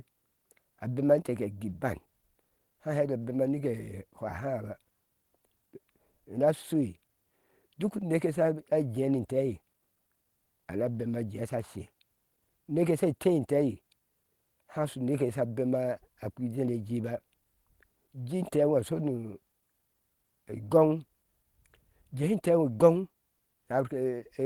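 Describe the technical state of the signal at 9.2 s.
At 9.2 s the speech signal is intact, with no audible fault.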